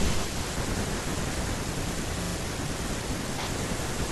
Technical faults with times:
2.23-2.35 repeated frames

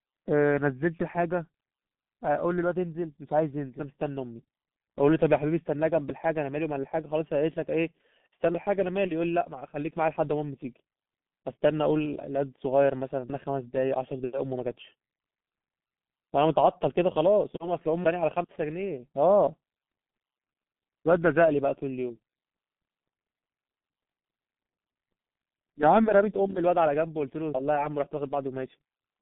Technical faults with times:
0.00-29.22 G.723.1 codec

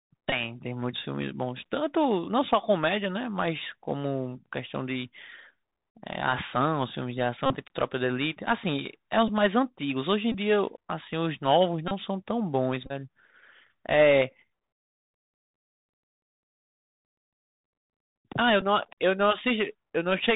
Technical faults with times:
0.00-20.36 Bluetooth CVSD headset codec
0.30-0.32 Bluetooth headset packet repeated
7.46-7.55 Bluetooth headset packet repeated
9.28 Bluetooth headset packet repeated
10.32-10.34 Bluetooth headset packet repeated
11.88-11.92 Bluetooth headset packet repeated
12.86-12.92 Bluetooth headset packet repeated
18.61 Bluetooth headset packet repeated

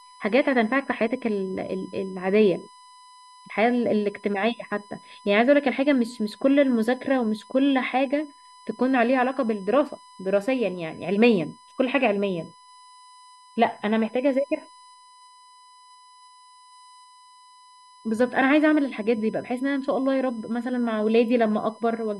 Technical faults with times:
0.00-22.19 USB whine

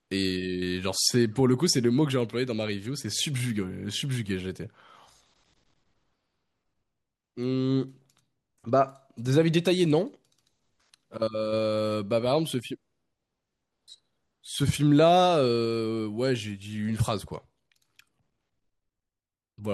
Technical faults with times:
none

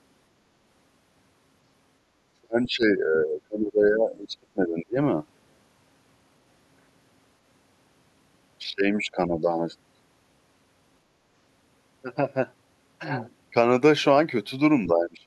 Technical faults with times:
2.27-4.98 speech suppressed in double talk
2.64-2.69 other side's voice leaking through
8.69-9.37 speech suppressed in double talk
14.87-15.27 speech suppressed in double talk

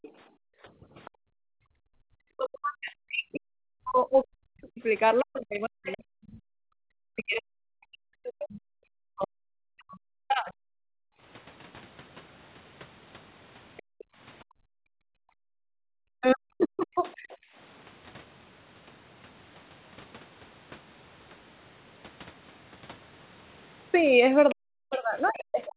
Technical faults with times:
0.02-1.11 other side's voice leaking through
0.25-1.93 background gated by the echo canceller
2.21-10.56 speech suppressed in double talk
10.84-17.57 background gated by the echo canceller
13.77-14.04 other side's voice leaking through
16.20-17.27 speech suppressed in double talk
17.30-17.37 other side's voice leaking through
24.50-25.68 other side's voice leaking through
24.52-25.77 speech suppressed in double talk

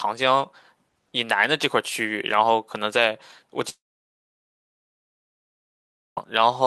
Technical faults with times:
3.69-6.25 long network dropout

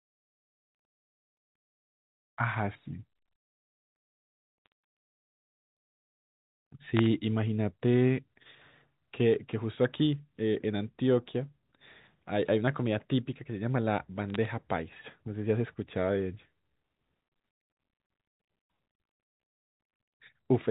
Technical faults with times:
4.66-4.72 bit errors on a digital phone line
6.97-7.06 bit errors on a digital phone line
11.31 bit errors on a digital phone line
14.30-14.45 bit errors on a digital phone line

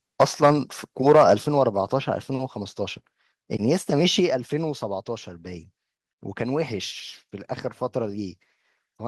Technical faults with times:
0.20-0.51 microphone overload
0.46 microphone volume stepped down
1.06-1.34 microphone overload
1.47 microphone volume stepped down
4.20 microphone volume stepped down

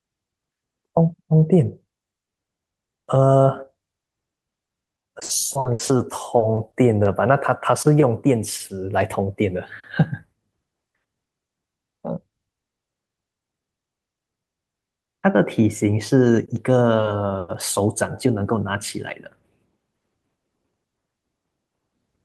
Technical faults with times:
4.53-6.01 repeated packet loss (robotic sound)
6.37-7.07 repeated packet loss (robotic sound)

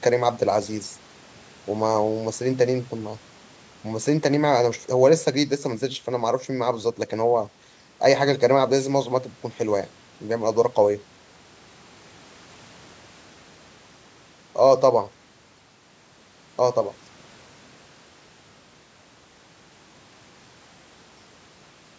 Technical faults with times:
none

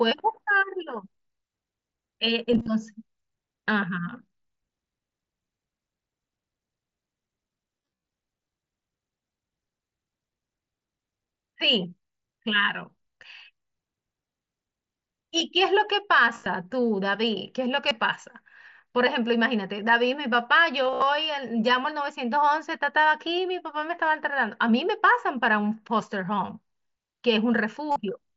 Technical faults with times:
2.52-2.68 concealed Bluetooth headset packet loss
7.82-8.07 concealed Bluetooth headset packet loss
16.35-16.46 concealed Bluetooth headset packet loss
17.88-17.91 concealed Bluetooth headset packet loss
20.84-21.02 concealed Bluetooth headset packet loss
27.91-27.96 concealed Bluetooth headset packet loss

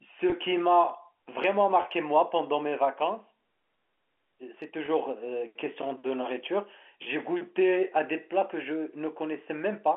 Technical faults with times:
0.30-0.32 packet loss with pitch repetition
1.82-1.84 packet loss with pitch repetition
4.86-4.88 packet loss with pitch repetition

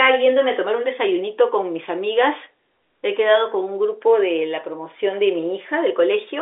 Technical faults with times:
none

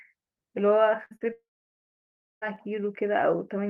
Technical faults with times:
1.05-1.12 burst of packet loss
1.16-1.22 short concealed packet loss
1.32-2.43 long network dropout

